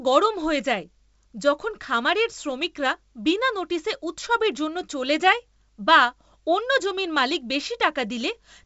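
No technical faults can be heard anywhere in this speech recording. It has passed through G.722 wideband telephone coding, which carries the speech up to about 7 kHz and leaves at most a faint trace of its coding, consistent with the full 64 kbit/s mode.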